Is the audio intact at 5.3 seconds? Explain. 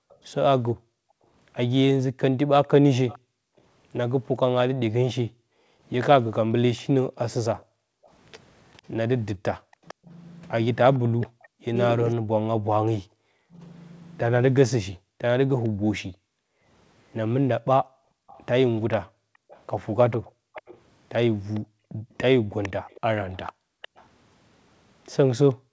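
No. Two faults overlap at that moment.

From 0 to 8.05 s, the background is gated by the echo canceller. While the far end plays through the loudspeaker, the canceller clamps the microphone hard to keep echo out. The room sound underneath the speech dips by as much as about 40 dB, adding up to roughly two seconds of lost ambience in this span, then comes back when the canceller releases.

Within that, from 5.31 to 5.35 s, the speech itself drops out for a brief 40 ms gap, falling by around 40 dB. This is likely speech suppressed in double talk. With both sides talking at once, the echo canceller could not tell the local talker apart from the loudspeaker echo and turned everything down together, so the talker's speech is briefly cut away.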